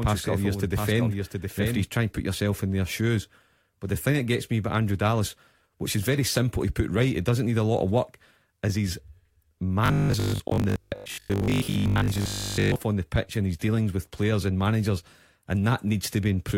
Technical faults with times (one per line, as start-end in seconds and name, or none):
0.00-1.84 doubled audio track
9.86-12.76 robotic sound from repeated short buffers